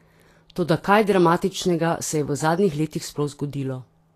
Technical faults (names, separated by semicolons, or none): Vorbis compression